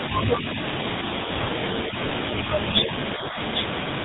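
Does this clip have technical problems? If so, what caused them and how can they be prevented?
Yes. GSM full-rate codec damage runs through the whole speech clip: the voice has a buzzy, gravelly roughness and nothing above 4 kHz, as expected from a coder that models the vocal tract and excites it with a sparse, regularly spaced pulse train at around 13 kbps. Prevention: carry the call end to end over a wideband codec such as AMR-WB or Opus instead of legacy full-rate GSM.

Speech suppressed in double talk at 2.44–2.63 s and 3.13–3.38 s: the voice dips by about 5 dB in the first stretch and by about 10 dB in the second, each lasting roughly a fifth of a second. The likely cause is an echo canceller that cannot tell the near talker from loudspeaker echo while both sides speak, so it ducks everything. Prevention: use an echo canceller with reliable double-talk detection, or a headset that keeps loudspeaker sound out of the microphone.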